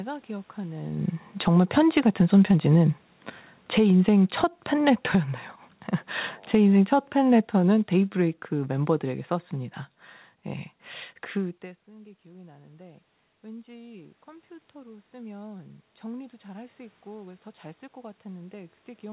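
From 1.25 to 2.03 s, automatic gain falling pulls level down about 8 dB, voice and background sinking together; the waveform envelope tapers smoothly rather than stepping. Automatic gain rising then lifts it about 3 dB from 1.66 to 5.5 s, overlapped by a further fall of about 4 dB (3.55–5.22 s), and another fall of about 7 dB follows (6.39–9.52 s), so the envelope visibly pumps. After the talker moves back near 11.5 s, the gain rises slowly from 11.61 s to the end, following an input drop of about 24 dB. Room noise swells with it, brightening the spectrogram's noise floor below the 4 kHz call-codec ceiling.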